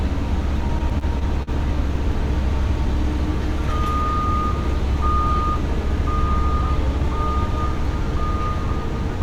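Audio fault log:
0.67–1.49 s, repeated stalls (stutter): packets reached the receiver later or more slowly than playback consumed them, so the jitter buffer ran dry six times in under a second. Each time the receiver stretched the last bit of sound to fill the hole, about 117 ms in total with the longest pause near 43 ms, roughly a seventh of the stretch. Nothing is lost, but the audio hitches and drags in quick, uneven jolts.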